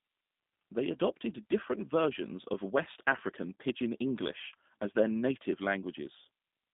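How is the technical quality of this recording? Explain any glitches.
The technical quality is limited by narrowband telephone-grade coding across the whole recording. The speech is clearly damaged by a G.729 codec, with a sound that fits 8 kbit/s G.729A. The codec rebuilds each short frame from a vocal-tract filter, pitch prediction and a few pulses, so the speech sounds rough and slightly synthetic. A spectrogram shows energy only from about 150 Hz to 3.7 kHz, with nothing above 3.8 kHz.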